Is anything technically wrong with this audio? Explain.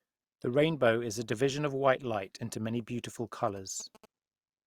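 Yes. From 3.33 to 4.05 s there are GSM signalling bursts: a nearby 2G phone's short radio bursts are rectified by the audio circuit, producing a galloping dit-dit-dit of short buzzes at about 217 Hz, roughly 20 dB below the speech.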